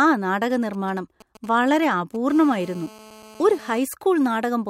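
A speech clip, where just after "ആ നാടക" GSM signalling bursts from 0.50 to 2.31 s give galloping dit-dit-dit ticks and short 217 Hz buzzes, roughly 25 dB under the speech, as a nearby 2G phone's radio pulses are rectified. From 2.31 to 3.79 s this becomes a steady GSM phone buzz, a hard, raspy 217 Hz tone with many harmonics about 23 dB below the speech, as the phone settles into a call. Its 217 Hz rate and rasp set it apart from the smoother 50 or 60 Hz of mains hum.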